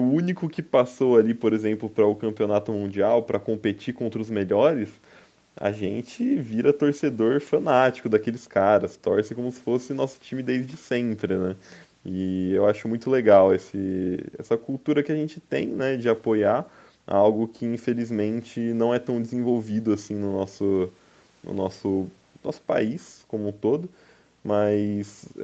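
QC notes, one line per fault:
No faults heard.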